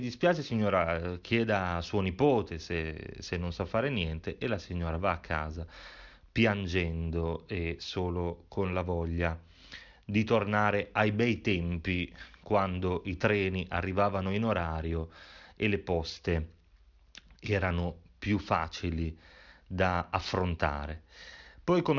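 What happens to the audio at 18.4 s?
Aliasing is present at 18.4 s, as it is across the whole speech clip. The audio was taken down to a lower sample rate, which fits a drop from 48 kHz to 12 kHz, without first removing content above half the new rate. Everything above 6 kHz folds back below that edge onto unrelated frequencies, sitting roughly 25 dB under the wanted signal. Sibilants come out gritty and metallic, and the spectrum runs hard up to 6 kHz.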